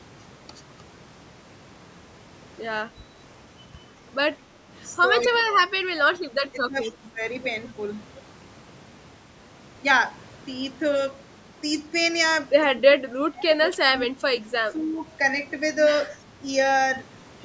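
At 5.21 s a faint, delayed copy of the speech surfaces for a moment, about 15 dB below it and trailing by 212 ms. This is an echo leak, likely from a loudspeaker echo canceller letting residue through. Overlapping it, from 5.23 to 5.69 s, the speech dips sharply, by roughly 25 dB at its deepest, over about 0.4 s. This is speech suppressed in double talk, likely because the canceller, facing simultaneous talk, turned down the near talker with the echo.

From 6.51 to 7.21 s the speech sinks again, by roughly 15 dB across about half a second, the same double-talk suppression. Within that stretch, from 6.82 to 6.92 s, a fainter echo leak returns, about 20 dB down at the same 212 ms delay.

The longest dropout runs from 12.74 to 14.25 s. Speech is pushed down by as much as roughly 30 dB for about a second in total. A shorter dip of roughly 15 dB follows from 14.65 to 15.03 s. Both are suppression in double talk.

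Last, from 16.03 to 16.15 s, a faint echo leak, about 30 dB below the speech, repeats the speech 212 ms late.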